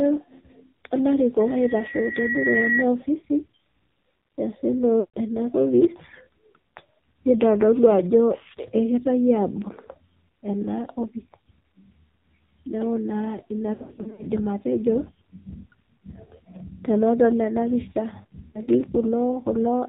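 Right from the start, the whole clip runs through the AMR narrowband mobile codec. Nothing gets through above 4 kHz, and that heavy buzzy, synthetic edge fits a low mode around 5.9 kbps.

Lost AMR speech frames show up three times. At 5.00 s about 140 ms goes missing, and the decoder smears the last sound out and fades it. From 13.74 s to 14.25 s the losses scatter across 440 ms in runs of up to 80 ms, so the sound turns choppy and warbly. At 18.48 s there's a quick 60 ms dip.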